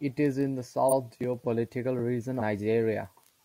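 Compressed frames are skipped twice, at 0.88 to 0.93 s, just after "is in the", and at 2.37 to 2.42 s. Each time, the speech jumps ahead about a third of a second, which fits roughly seven missing frames of 42.7 ms.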